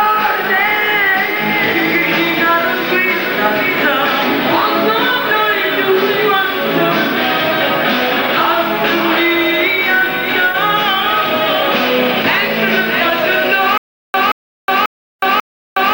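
From 13.78 s to the end, the audio breaks into a stutter with silent gaps. A fragment of about 176 ms plays, then digital silence of about 366 ms follows, and the same fragment returns four times at an even period of about 541 ms. The likely cause is a stalled player or stream that replays its last buffered fragment on each retry and then runs empty. Whatever audio belonged in those gaps is lost.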